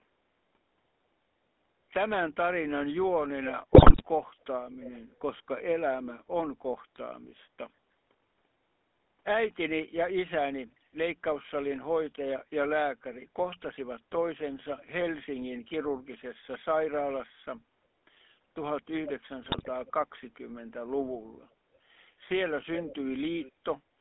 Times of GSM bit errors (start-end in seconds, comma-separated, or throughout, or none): 3.74-4.02, 19.42-19.69